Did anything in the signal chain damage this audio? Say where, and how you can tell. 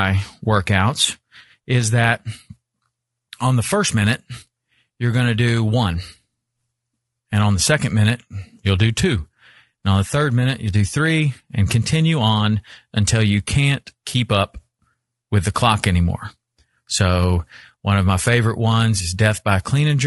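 Yes, at the codec stage, throughout the speech. The voice sounds rough and grainy, with noise between the harmonics and a synthetic-sounding top band. The likely cause is low-delay AAC compression (AAC-ELD) near 32 kbps, whose short frames resolve pitch harmonics poorly.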